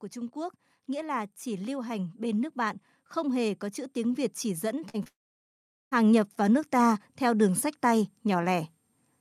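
A speech recording whose level, voice and background together, swells steadily from 0.13 s to 8.62 s by about 14 dB: automatic gain rising, as the gain control keeps lifting what it hears as too-quiet input. Brief smeared wobbles at 4.89 s and 5.04 s mark short concealed packet loss, where about 40 ms and then 20 ms of audio arrived late and the receiver filled each gap by extending the preceding sound. Right after, from 5.08 s, the sound trails off as a fading buzz into roughly three quarters of a second of silence and resumes at 5.93 s with that stretch missing, likely a long network dropout in which nearly 0.84 s of audio never arrived.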